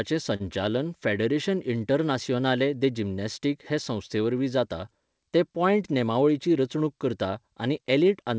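A speech recording that passed through a call codec, with nothing above 8 kHz, which fits a 64 kbps G.722 stream. At 0.36 to 0.42 s a sound hangs on slightly too long, with a slight buzz or dip, before the speech carries on without a gap. This is a short stall from a late packet: the jitter buffer ran dry, so the receiver stretched the last sound by about 40 ms until the packet turned up, then resumed exactly where it left off. Nothing is lost, but the timing there is pushed back by 40 ms. Between 5.93 and 6.29 s, after "संस्थेवरवीं जाता जें पॉयंट" and before "रचणूक करता", the speech briefly sounds rushed at an unchanged pitch, running at about 113% speed. That is a jitter buffer speed-up: with more audio queued than it wanted, the receiver repeatedly cut out short pitch-period-sized slices, trimming roughly 50 ms to bring the delay back down.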